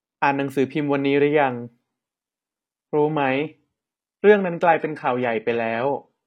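At 1.82 s the adaptive stream switches to a lower bitrate; from there the speech abruptly loses everything above 12.3 kHz and turns synthetic, with no gap.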